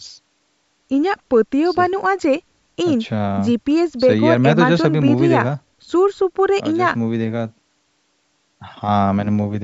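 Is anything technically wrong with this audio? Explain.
No, nothing's technically wrong here; it's speech that's been through ordinary call microphone processing, which trims the lowest bass and leaves nothing above 8 kHz, and that's just how a call sounds.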